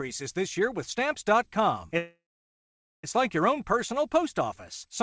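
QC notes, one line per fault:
1.98–3.05 s, call audio freeze: the speech halts and its last sound trails off, then falls to about 0.85 s of silence. It resumes at "like your own personal" with nothing lost. About 1.05 s is inserted, likely from delayed packets emptying the jitter buffer.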